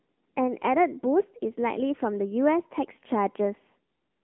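Throughout, the speech has been squeezed through the AMR narrowband mobile codec at a low bit rate, which sounds like roughly 8 kbps. Nothing outside about 200 Hz to 3.4 kHz survives, and the sparse pulse-driven vocal model leaves the voice plainly buzzy and synthetic.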